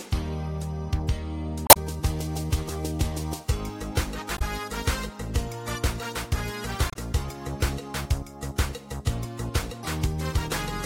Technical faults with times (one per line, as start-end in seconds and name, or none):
1.65-1.77 damaged data in a compressed stream
4.34-4.42 damaged data in a compressed stream
6.90-6.96 damaged data in a compressed stream